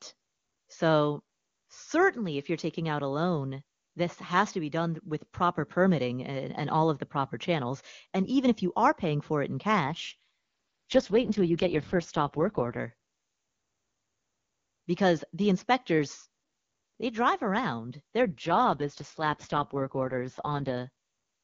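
Two AMR rate drops show up in this speech, from 9.84 to 12.80 s and again from 18.22 to 20.78 s. In both, the voice goes rough, buzzy and synthetic while the bandwidth stays put and nothing drops out. That's what you'd expect if the link weakened and the network pushed the codec down from the clean HD Voice rate to around 6.6 kbit/s, spending bits on error protection. Clarity snaps back once the rate recovers.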